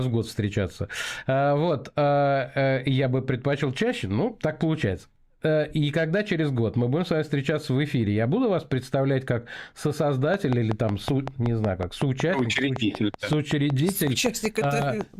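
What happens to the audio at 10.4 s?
At 10.34 s a train of clicks begins and runs to 15.02 s: about thirty near-identical pulses at a steady 5.35 per second, standing well above the sound. That regularity sets it apart from random crackle. The likely cause is interference or a faulty connection.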